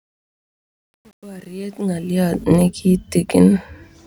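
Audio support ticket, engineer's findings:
Truncation distortion on the fade-in, 0.0–2.44 s, worst 0.0–1.92 s: gritty quiet end. Fade gain stage is likely requantizing to about 9 bits without dither. Level-tracking grit distinguishes it from codec dropouts.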